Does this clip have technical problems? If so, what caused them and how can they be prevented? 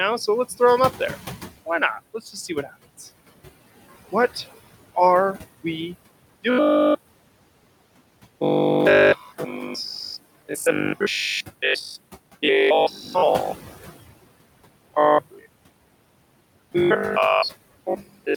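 Yes. Noise suppressor artifacts run through the whole clip. The suppressor pulls the room noise down by about 20 dB in the gaps between words and lets it come back up underneath them, so the background pumps in and out. The room noise itself sits about 17 dB below the speech and is part of the recording rather than a fault. To prevent this, use a gentler suppression setting or reduce the room noise at the source.

Speech cut by the noise suppressor occurs at 2.14–2.75 s (a drop of about 9 dB), 9.17–9.48 s (about 7 dB), 12.91–13.15 s (about 7 dB), 15.31–15.46 s (about 16 dB) and 17.87–18.28 s (about 21 dB). Each time, the suppressor treats part of the speech as noise and turns it down along with the background. Only brief slices, between a tenth and a fifth of a second, are affected, but soft sounds and word endings come out swallowed, most severely near the end. Lowering the suppression strength or raising the speech level relative to the noise prevents this.

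Robotic sound from repeated short buffers starts at 6.5 s, right after "are we", and lasts to the end. The voice becomes a stiff, metallic drone at 50 Hz that still roughly follows the speech contour. The likely cause is new audio arriving too late, so the software keeps replaying the last 20 ms or so to fill the gap while most of the real signal is skipped. That 50 Hz repetition rate fits a 20 ms buffer. Larger jitter buffers and a more stable network or CPU load prevent it.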